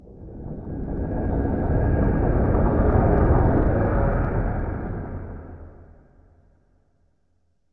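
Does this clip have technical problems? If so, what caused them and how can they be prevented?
No, nothing stood out as a technical problem on listening to this clip, so there is no cause to trace and nothing to prevent.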